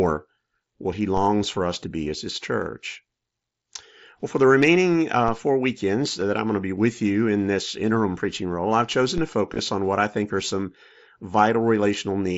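At 1.17 s the waveform's zero line jumps, as if an offset input were switched in, then drains away slowly, as through a high-pass near 5 Hz. This DC step is a single low thump under the speech. The speech itself continues unchanged, carried over the mSBC headset codec with its light grain.

Concealed Bluetooth headset packet loss follows at 2.04 s and 6.21 s. Headset packets went missing and the receiver patched each gap by repeating a closely matching stretch of recent waveform. These brief losses, roughly 15 ms and 7.5 ms, are nearly hidden.

A second DC step at 9.18 s gives the same thump and slow recovery.

From 9.53 to 9.59 s, losses cluster across about 60 ms, with the longest gap near 22 ms. The patching turns buzzy and tonal, with a small warble where real audio resumes.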